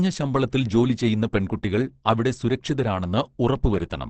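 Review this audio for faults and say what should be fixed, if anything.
Throughout, the speech sounds muffled and hoarse, with nothing above 8.5 kHz: a spectrogram shows a flat ceiling there. This is likely Opus compression in its speech (SILK) mode, which fits a bitrate near 16 kbps. Encode at a higher bitrate to prevent it.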